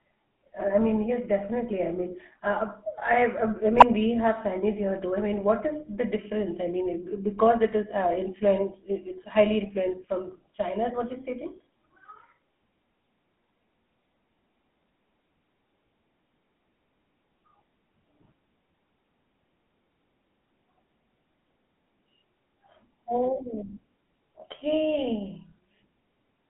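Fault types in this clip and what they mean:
GSM full-rate codec: Present for the whole clip, this is the original GSM speech coder, which models the vocal tract as a filter and excites it with a sparse train of regularly spaced pulses, keeping only one excitation sample in three. The speech carries a plainly audible buzzy, gravelly roughness from that coarse excitation, and the band sits between about 200 Hz and 3.4 kHz. The sound fits a 13 kbps full-rate stream.
GSM bit errors: From 3.76 to 3.83 s, just before "we have", corrupted bits reach the decoder and scramble the filter, pitch and gain parameters it uses to rebuild speech. The result is a brief squawking, gargled burst. Its length of roughly 70 ms fits about three damaged 20 ms frames on a noisy radio link.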